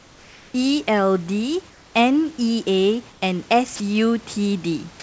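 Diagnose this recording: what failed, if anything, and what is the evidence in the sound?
In the pauses at 0.00–0.54 s, 1.70–1.94 s and 3.12–3.22 s, the real room background gives way to a smooth, featureless hiss about 2 to 3 dB quieter. This is comfort noise in place of the background, likely from discontinuous transmission at the call-processing stage.

From 3.76 to 3.80 s, 40 ms of speech vanishes into that same steady noise before returning. This is sound dropped by the voice detector, likely because the sender's detector judged the sound as background and stopped transmitting, leaving the receiver to fill the gap with comfort noise.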